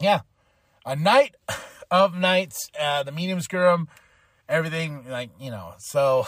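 A speech recording with nothing technically wrong with it.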